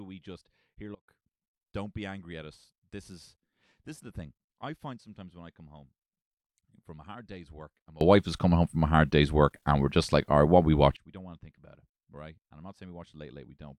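A speech recording whose level drops abruptly by about 24 dB from 0.95 s to 1.08 s, then lurches up by about 24 dB from 8.01 s to 10.97 s, with the background noise rising and falling in lockstep and hard edges at each boundary. This is a sudden gain jump, likely from a gain setting applied instantly between adjacent samples rather than ramped in.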